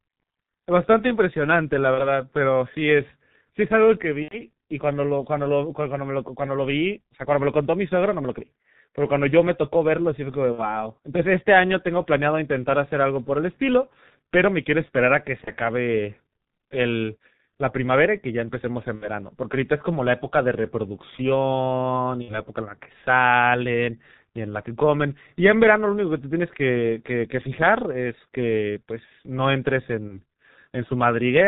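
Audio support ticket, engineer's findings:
Muffled, hoarse speech with blurred consonants and nothing above 4 kHz, throughout. G.723.1 codec at 6.3 kbit/s, heavily damaged. Its 30 ms frames and slowly updated voice model smear transients.

Brief buzzy, fading smears, then weak recovery, at 1.94–2.11, 4.22–4.43, 10.52–10.69, 15.44–15.51, 18.95–19.09, 22.22–22.40 and 30.08–30.18 s. VoIP packet loss concealed by the speech codec: the decoder extrapolates the last pitch and filter at falling gain. The longest gap fits about three lost 30 ms frames.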